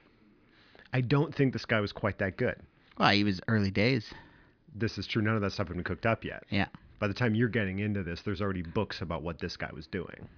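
Speech recording, no audible technical faults found.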